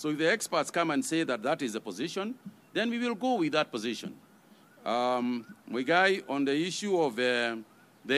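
Nothing is technically wrong with this clip.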